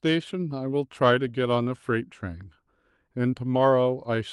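From start to finish, the clip carries clock drift between sender and receiver. The sending side's audio clock runs roughly 3% slow, so the receiver's jitter buffer keeps draining and must be topped up to avoid running dry. Unlike packet loss, which leaves random gaps or garbled bursts, this pressure never changes direction, so the disturbances are small, steady in kind, and spread across the whole clip rather than clustered around isolated damage.

From 0.32 s to 4.16 s, repeated timing corrections show that drift at work. The receiver keeps repeating short slices of the speech to fill the shortfall, stretching the passage to about 97% speed and adding roughly a tenth of a second overall. The edits fall at uneven intervals, heard, if at all, as faint hiccups and a slightly dragging, unsteady tempo rather than a smooth, uniform slowdown. All this rides on the Opus call codec, whose top end stops near 12 kHz.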